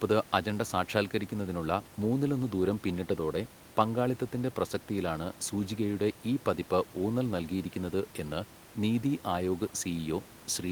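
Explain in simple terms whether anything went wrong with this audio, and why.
Listening through this speech recording, nothing went wrong; the only extra sound is a faint background noise from the room, which sits well below the speaking and comes from the recording space itself rather than from any problem.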